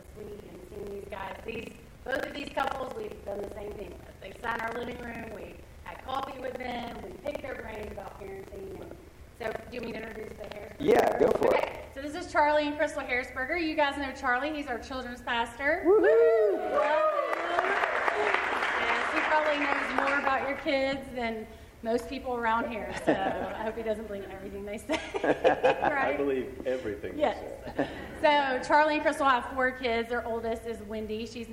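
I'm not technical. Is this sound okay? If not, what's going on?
No. From the start to 11.85 s there's buffer tearing: the playback software and the sound hardware slipped out of step, so each tiny chunk mixes in a fifth-ish of slightly stale sound. That causes a robotic 25 Hz buzz that disappears afterwards.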